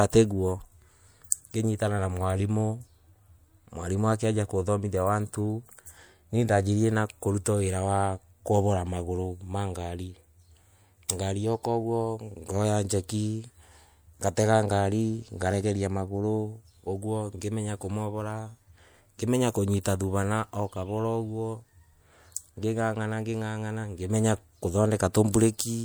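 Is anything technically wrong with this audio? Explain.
Yes. The speech carries pre-echo at 11.08 s and 25.32 s, smearing ahead of two sharp attacks by about 11 ms and 19 ms. The codec spread its block's quantisation noise backwards into the quiet before each onset, giving a short hiss and softened attack. A spectrogram shows a broadband haze before each transient; the waveform shows low-level fuzz ahead of the sudden rise.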